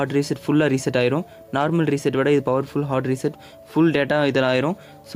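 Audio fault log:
throughout, gain pumping: the level is pulled down on every loud sound, a swing of about 5 dB, so loud and soft parts sit closer in level, likely from input gain set far too high with a fast limiter pulling it down; the waveform looks squashed.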